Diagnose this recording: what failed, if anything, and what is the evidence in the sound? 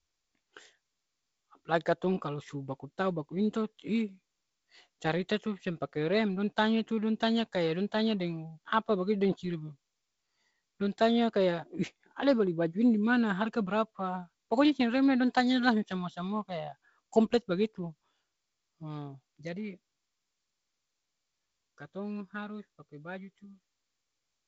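Nothing failed in this recording.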